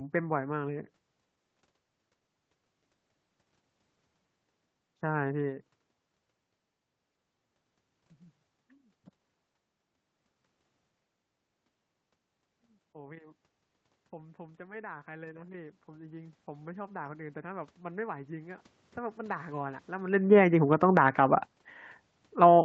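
From 14.11 s the automatic gain rising kicks in. The gain control decided the input was too quiet and started pushing its gain up, slowly, all the way to 21.6 s, adding about 11 dB in total. You hear the voice and the room noise behind it swell together. That's the giveaway that it's gain and not the talker getting louder.

Partway through that climb, at 20.17 s, there's an automatic gain falling that runs to 21.16 s. The control now judges the level too hot and pulls back by about 7 dB. The sound starts out loud and then sinks, background and all, over roughly a second. It lands around the same time the talker shifts position near 20 s, so the level really wobbles through that stretch.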